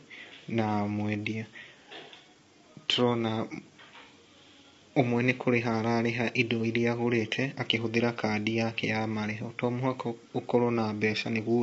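Throughout the speech, the sound is rough and grainy, with a hiss-like texture filling the gaps between the voice's harmonics and a thin, artificial upper range. This points to low-delay AAC compression, likely AAC-ELD at a low rate that fits about 24 kbps: short frames resolve pitch poorly, and at this low rate bits run short. On a spectrogram, harmonic lines look smeared and speckled, and all energy stops sharply at 7.7 kHz.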